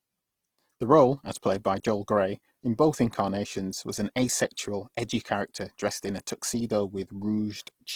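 From start to end the speech sounds rough and grainy, with noisy texture filling the top rather than swirling holes, likely Opus compression at about 16 kbps. Unlike MP3 damage, it stays full-band, reaching 20.4 kHz, because the coder fills starved bands instead of dropping them.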